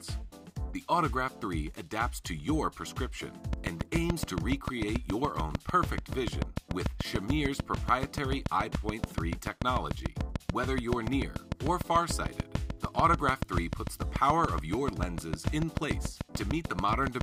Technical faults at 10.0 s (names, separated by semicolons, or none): train of clicks